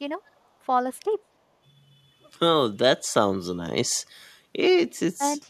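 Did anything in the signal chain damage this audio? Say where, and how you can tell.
Yes. An echo leak appears from 0.25 to 0.31 s, in the call-processing stage: a brief, very faint delayed copy of the speech, roughly 40 dB below it, trailing the original by 293 ms. The likely cause is a far-end loudspeaker whose echo canceller failed to fully subtract what its microphone picked up, so that residue was sent back down the call and arrives as a short, quiet scrap of repeated speech.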